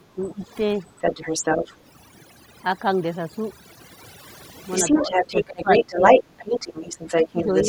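Throughout the clip the background drops and breaks up into twinkling specks. This is overdone noise removal, where a noise reducer set too strong shuts off frequency bands along with quiet parts of the voice.

From 0.00 to 0.49 s the voice drops deeply, by roughly 25 dB, and this is likely speech suppressed in double talk, with the echo canceller turning down both talkers at once.

Between 0.99 and 1.75 s a second voice comes through at about the same level as the talker, likely the other side's voice leaking through from the loudspeaker past the echo canceller.

From 4.73 s to the end that leaking voice returns, now somewhat louder than the talker, and again it is likely residual loudspeaker echo.

Within that stretch the talker's voice dips by around 15 dB between 4.91 and 6.04 s, then only slightly from 7.32 to 7.55 s. Both dips are likely further double-talk suppression.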